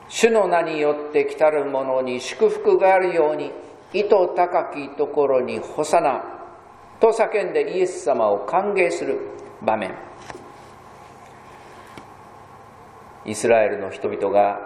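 Compressed frames skipped at 14.04 s: roughly one frame of the compressed stream never reaches playback, either missing from the file or rejected by the decoder as damaged. The sound jumps forward by around 20 ms, about one 23.2 ms frame.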